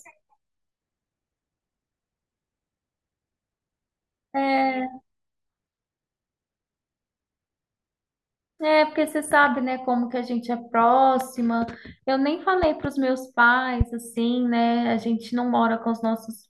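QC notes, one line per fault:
12.63–12.87 s and 13.81–13.83 s, loud pop: a sharp double pop about 10 dB above the speech, then a single harder pop about 15 dB above, with the speech continuing underneath; likely sudden voltage spikes from a plug, switch or static, shaped by the downstream circuits.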